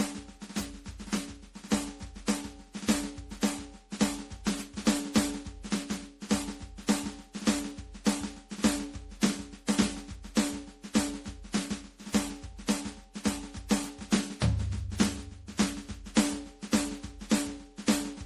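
From start to finish the music sounds swirly and hollow, with a watery smear over sustained tones, blurred attacks, and nothing above about 17.6 kHz. This is generation loss, and the likely cause is repeated MP3 coding at 64 kbit/s, around seven passes. Each re-encode quantises again on a shifted frame grid, so fresh noise and spectral gaps pile up on the last, leaving the sound more damaged than one encode at that bitrate would.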